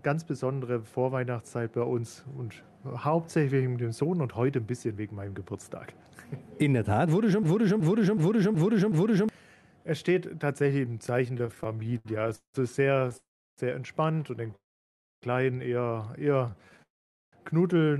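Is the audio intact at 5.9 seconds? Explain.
Yes, the audio is intact at 5.9 seconds: nothing breaks or drops out at that point, and what comes through is just the ordinary sound of a WebRTC call path.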